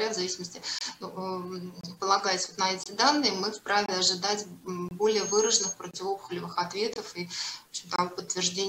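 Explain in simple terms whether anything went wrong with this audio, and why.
Gap between chunks at 0.79, 1.81, 2.84, 3.86, 4.89, 5.91, 6.94 and 7.96 s: the audio arrives in one-second pieces, and a 25 ms silent hole interrupts each join.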